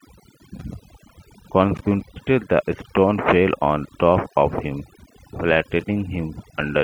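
Overdone noise removal runs through the whole speech clip. The noise reduction was set too aggressively, so frequency bands near its noise estimate are pulled down or gated off, taking quieter speech detail with them. Pauses fall to near silence with twinkling specks.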